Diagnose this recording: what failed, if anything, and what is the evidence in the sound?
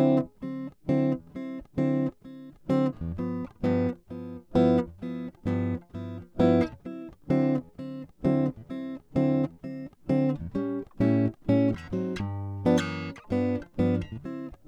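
Nothing in this music recording points to a failure at any stage of the chain. No audible event in the sound marks any point where something went wrong.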